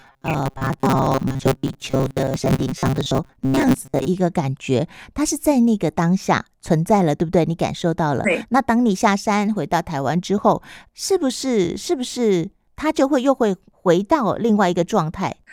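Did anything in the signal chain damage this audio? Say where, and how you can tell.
Yes. From 0.01 to 4.07 s the speech becomes robotic sound from repeated short buffers, a rigid metallic buzz at 133 Hz, likely a starved driver buffer replaying about 7.5 ms chunks for roughly half the audio. Waveforms show identical repeating cycles; spectrograms show evenly spaced 133 Hz harmonic stripes.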